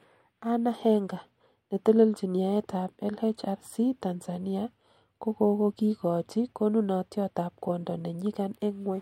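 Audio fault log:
Nothing stood out on listening to the speech in this recording.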